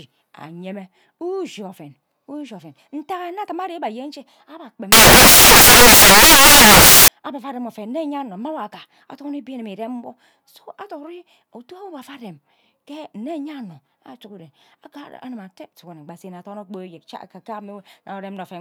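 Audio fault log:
4.92 to 7.08 s, samples built from the wrong bytes: for just over two seconds the speech gives way to loud, harsh broadband noise, because each sample's bytes are being misassembled, so the rapidly fluctuating low-order bits land in the high positions and dominate the waveform.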